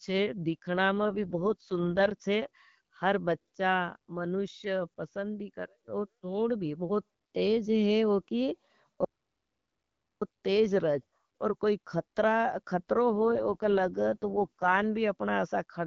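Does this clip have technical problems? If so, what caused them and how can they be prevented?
Yes. From 0.98 to 2.12 s, between "छे दिखना" and "छे हर बच्चा मनुष्य", and again from 13.07 to 14.84 s, the speech turns rough, buzzy and more synthetic while keeping the same bandwidth and never breaking up. This is an AMR rate drop. The AMR-WB codec, which sounds fairly clean at its usual rate, was switched to a lower mode with fewer bits for the voice model, which fits a step from 12.65 down to 6.6 kbit/s. A stronger radio link, or a network configured to keep a higher minimum codec mode, would prevent it.

From 9.05 to 10.22 s the sound cuts to silence, with no room tone at all, and resumes just before "तेज रहे हैं और". This is an audio dropout to silence, and about 1.17 s of speech is lost. The likely cause is that the input signal was interrupted, through a loose connection, a failed link or an accidental mute, while the recorder went on writing silence. 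Secure cabling, a stable link and monitoring the input level during recording would prevent it.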